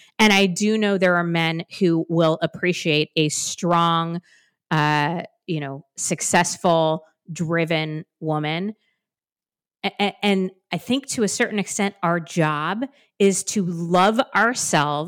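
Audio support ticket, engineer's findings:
Hard clipping throughout, on speech peaks. Gain stage driving signal about 10 dB past converter/format ceiling; a small fraction of samples flattened. Waveform: squared-off peak tops. Spectrogram: vertical broadband smears to high kHz at each clipped peak, heard as crackle.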